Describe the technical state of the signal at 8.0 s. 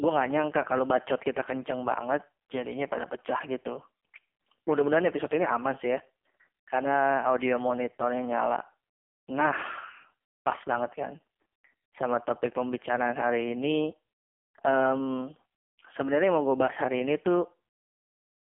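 At 8.0 s, as throughout the clip, the speech has passed through the AMR narrowband mobile codec at heavy compression, which fits its lowest mode of about 4.75 kbps. Only 250 Hz to 3.4 kHz survives, so the voice sounds thin, buzzy and synthetic.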